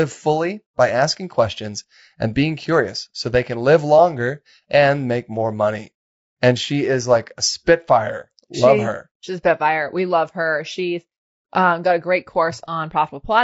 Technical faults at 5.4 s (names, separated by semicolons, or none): low-delay AAC compression